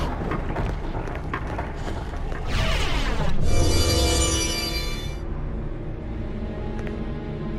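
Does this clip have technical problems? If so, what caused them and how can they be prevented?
No, the signal shows no technical problems anywhere in the clip, so there is nothing that needs preventing.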